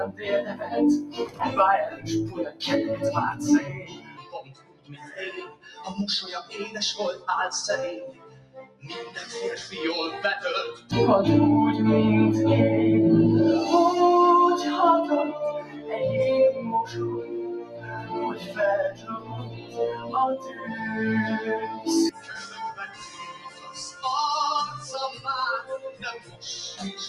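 Across the whole clip the level breathes and pumps: sharp onsets arrive intact, but anything held or decaying sags, so the sound thins and flutters, with swings of around 15 dB. This is a noise suppressor applied to music or sounds. A processor tuned for speech treats sustained, steady content as background noise and pulls it down, while transients pass before it reacts.

The sound cut by the noise suppressor is most obvious in specific stretches. From 0.07 to 2.61 s, 3.34 to 5.66 s and 8.12 to 8.86 s, sustained parts sink by up to about 14 dB. There are brief dips of about 10 dB at 10.75 to 10.92 s and about 12 dB at 15.61 to 15.97 s. The longest and deepest stretch runs from 16.57 to 20.8 s, reaching about 14 dB, and there are further dips from 21.7 to 24.03 s and 25.86 to 26.44 s. In each, held tones and tails are clamped short because the suppressor judged them to be noise.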